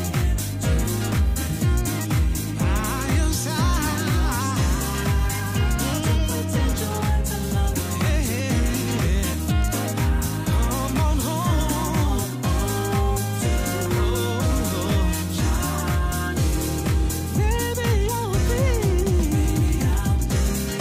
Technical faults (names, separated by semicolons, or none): none